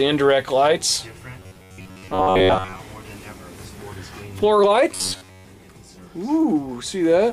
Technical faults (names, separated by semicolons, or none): robotic sound from repeated short buffers